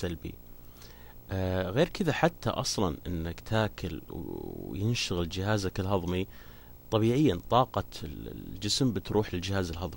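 Video or display buzz runs through the whole speech clip, roughly 25 dB below the speech. A screen or video cable has coupled into the audio path, producing a buzz at the 59.94 Hz field rate with hash above it, plus a thin high tone at 15.7 kHz from the line rate.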